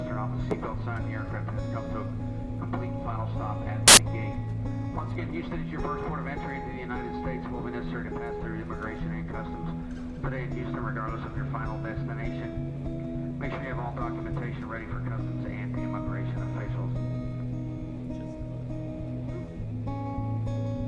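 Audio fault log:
3.88–3.97 s, file tags played as audio: an embedded cover picture read as samples gives a very loud burst of white noise with abrupt edges, unrelated to the surrounding sound.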